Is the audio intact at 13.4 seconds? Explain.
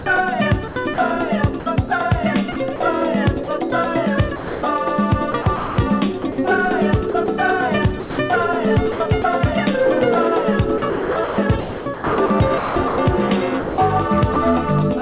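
No, 13.4 s falls inside a patch of sound chopped by the voice detector, running from 10.78 to 14.36 s. The sender's detector likely kept flipping between transmitting and going quiet, so about 1.46 s of that stretch was swapped for synthetic comfort noise instead of the real signal. You hear it as choppy, clipped edges, with holes filled by generated comfort noise, all within the call path's 4 kHz ceiling.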